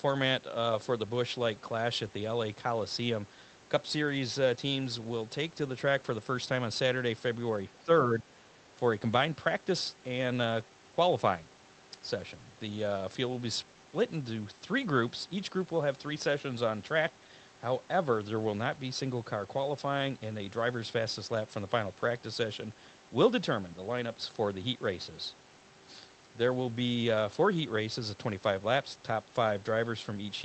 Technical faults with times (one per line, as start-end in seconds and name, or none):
7.70-8.51 speech suppressed in double talk